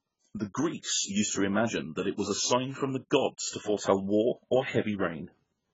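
Speech throughout, and the whole recording sounds dull and smeared, with nothing above about 7.6 kHz and a watery, warbling texture clinging to vowels and fizzing on sibilants. The damage is heavy and constant from start to finish. The likely cause is AAC compression at a starved setting. The sound fits AAC-LC at roughly 12 kbps, where the encoder drops the top band and leaves holes or patched noise in the spectrum it keeps.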